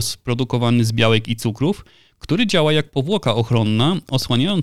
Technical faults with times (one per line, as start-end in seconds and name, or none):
3.12-4.51 train of clicks